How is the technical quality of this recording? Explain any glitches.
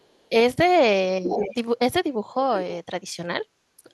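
There's one glitch worth flagging: an echo leak from 1.24 to 1.55 s. For about a third of a second, a delayed copy of the speech comes back roughly half a second behind the original, and it's only a little quieter than the speech itself. The likely cause is a speakerphone on one end whose echo canceller didn't fully strip out what its mic picked up from the loudspeaker, so that leftover got sent back down the line.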